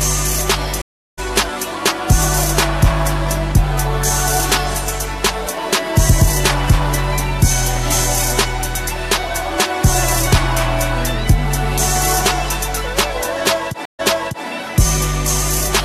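A stream reconnect at 0.82 s cuts the sound to silence for 0.36 s. The connection dropped, the player reconnected and started a fresh decoder mid-stream, so at 1.19 s the audio resumes about a fifth of a second further on, a small forward jump. A second stream reconnect at 13.85 s is silent for 0.13 s, but the server resent buffered data, so at 14.45 s the sound restarts 0.46 s earlier and repeats that stretch.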